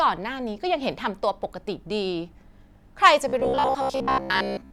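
From 3.28 s to 4.72 s, new audio likely arrived too seldom, so a chunk of about 15 ms kept being replayed in place of most of the real signal. The result is robotic sound from repeated short buffers: a rigid, metallic 66.8 Hz buzz loosely following the speech.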